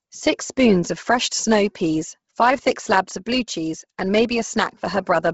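Throughout, the speech sounds breathy and grainy with nothing above 7.7 kHz, likely Bluetooth LC3 compression at a low bitrate near 16 kbps, patching the upper band with noise.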